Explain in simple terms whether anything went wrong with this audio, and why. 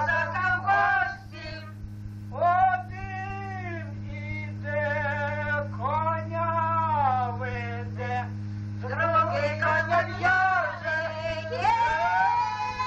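Nothing went wrong with this audio that a careful listener could pick out. At no moment does a technical problem interrupt or alter the sound.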